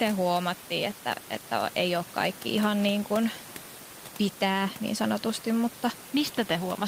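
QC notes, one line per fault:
Nothing here needs flagging; there's just some ordinary room background sitting well below the speech, about 19 dB down.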